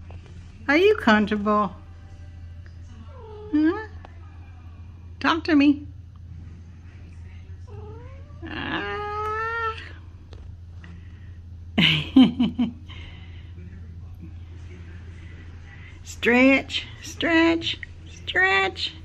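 The stream likely lost a fraction of a millisecond of samples five times, producing dropped samples: the waveform jumps abruptly to a later value, heard as single sharp clicks at 0.91, 4.35, 7.74, 9.26 and 12.49 s, with no audible gap in the sound.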